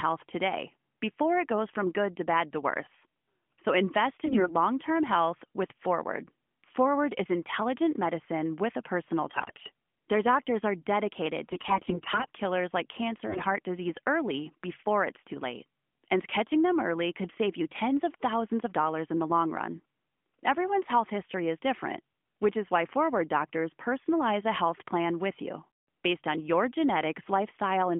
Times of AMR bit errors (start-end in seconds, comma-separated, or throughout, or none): 4.26-4.55, 9.28-9.72, 11.46-12.30, 13.26-13.46